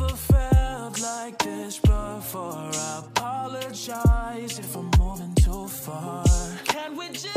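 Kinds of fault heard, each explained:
Nothing stands out here at all, with no dropouts, glitches or distortion catching the ear anywhere along the way.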